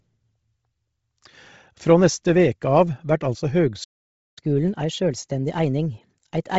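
Throughout the speech, the top end stops near 7.7 kHz, with grainy, breathy, noise-filled highs, likely from Bluetooth LC3 compression at a low bitrate, consistent with about 24 kbps. At 3.83 s, right after "veke av vert altså", a playback stall silences the output for about 0.53 s, likely because the player ran out of data. From 4.39 s to the end, catch-up at higher speed runs the audio 1.15 times faster, raising pitch about two semitones while the backlog drains.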